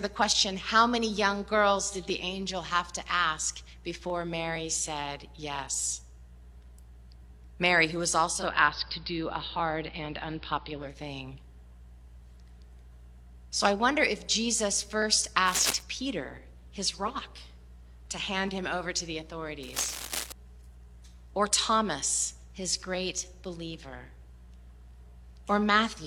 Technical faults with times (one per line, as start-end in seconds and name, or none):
8.27-11.01 digital radio blending to analogue
15.47-15.81 cable scratch noise
19.63-20.32 cable scratch noise